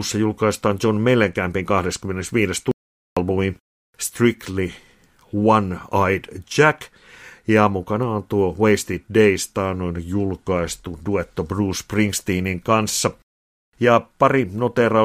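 Audio dropout to silence, 2.71 to 3.17 s: speech cuts to digital silence, no room tone, for 0.45 s, likely from a lost input.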